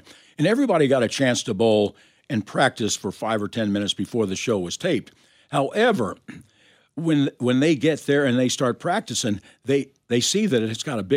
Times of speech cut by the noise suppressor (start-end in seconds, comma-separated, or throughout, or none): none